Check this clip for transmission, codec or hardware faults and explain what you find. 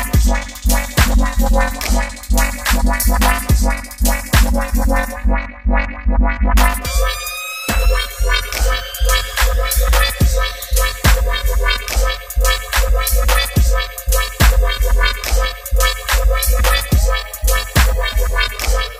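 No faults turned up when I checked this clip.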